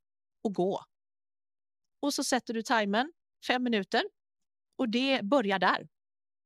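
At 2.77 s the stream likely lost a couple of samples. These dropped samples make the waveform jump abruptly, producing a single sharp click in the speech.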